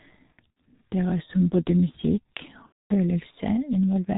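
Throughout the speech, the G.723.1 codec at about 6.3 kbit/s squeezes everything into 30 ms frames with a coarse, slowly updated voice model and no content above 4 kHz. The heavy damage leaves the speech muffled and hoarse, with smeared consonants.

VoIP packet loss concealed by the speech codec appears first from 0.32 to 0.56 s. The missing audio, about 120 ms in total, is scattered across 240 ms, with the longest gap 60 ms. The decoder fills the gaps by repeating its last pitch and filter at falling gain, producing brief buzzy, fading stretches. From 2.66 to 2.94 s, 240 ms of audio is lost, which fits eight lost frames, and is filled with the same buzzy, fading concealment. The speech stays weak and distorted for a moment afterward while the decoder recovers.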